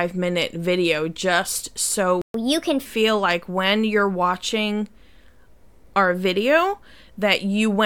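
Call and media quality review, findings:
Playback stall, 2.22–2.34 s: speech cuts to silence for 128 ms mid-flow, then resumes exactly where it stopped, with no material skipped. That distinguishes it from a packet-loss dropout. Likely a player buffer underrun or a blocked audio thread.

Catch-up at higher speed, 2.34–2.86 s: directly after the stall, speech runs at 1.25x with pitch raised roughly four semitones, then returns to normal. The player is resampling to drain the backlog. Because pitch rises with tempo, this is not time-stretched acceleration.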